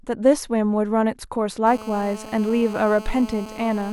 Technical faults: GSM phone buzz

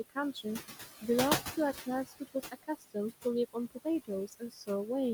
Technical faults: noise suppressor artifacts; speech cut by the noise suppressor

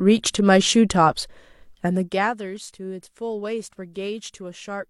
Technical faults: none

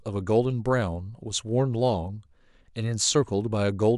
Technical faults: none

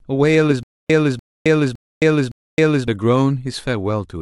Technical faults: stutter with silent gaps

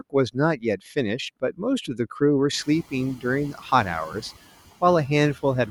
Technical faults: noise suppressor artifacts

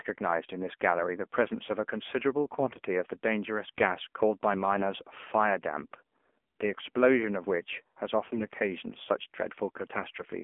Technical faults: AMR narrowband mobile codec; AMR bit errors

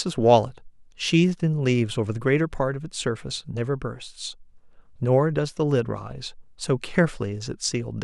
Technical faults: none

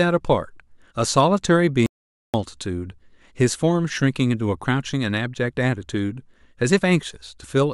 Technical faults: playback stall

